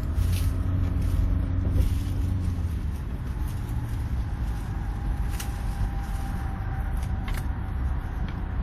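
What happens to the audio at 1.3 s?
At 1.3 s the sound carries the same damage heard across the whole clip, which is most likely WMA compression. The transform codec spreads its quantisation noise over tens of milliseconds and zeroes weaker spectral lines, so the sound rings and smears, with a washy hiss that swells and fades with the signal. The damage is plainly audible, which fits a bitrate around 48 kbps, and nothing remains above 18 kHz.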